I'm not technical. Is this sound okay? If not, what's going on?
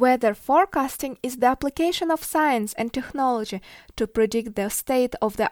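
Yes, nothing wrong can be heard in this recording.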